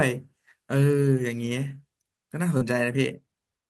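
At about 2.57 s, running to roughly 2.63 s, there's a short concealed packet loss. Around 40 ms of the call's audio never reached the decoder in time, so the receiver papered over the gap with roughly 35 ms of synthesised continuation, extending what came just before, then eased back into the real signal. You hear it as a quick smear or wobble in the speech. The audio passes through a call codec with a top end cut off near 12 kHz.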